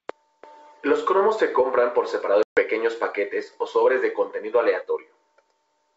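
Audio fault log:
2.43–2.60 s, packet loss on an ADPCM call: a hard-edged 140 ms silent gap, as from many small packets lost, then sound returns briefly rough while the decoder's predictor and step size resynchronise. Waveform shows a flat line; spectrogram shows a blank vertical band.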